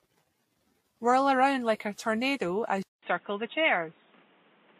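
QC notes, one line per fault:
Throughout: transcoding between lossy codecs. Smeared, layered artefacts and nothing above 15.1 kHz. This likely comes from a Vorbis-like encode re-encoded as WMA, with both codecs' damage stacking.
2.83–4.79 s: input switched to a poorer device. After "around like a tornado", a 200 ms silence, then sound capped at 3.8 kHz, boxy, with faint new noise and about the same level.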